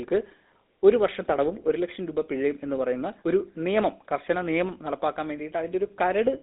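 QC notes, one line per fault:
Throughout: GSM full-rate codec. The speech carries a buzzy, gravelly roughness, plainly audible, because the codec rebuilds the voice from a vocal-tract model driven by evenly spaced pulses, discarding two of every three excitation samples. The line band sits at about 250 Hz to 3.7 kHz, which fits a 13 kbps GSM full-rate channel. On a spectrogram, energy stops dead near 3.8 kHz, with an empty band above. Harmonics look smeared and grainy rather than clean.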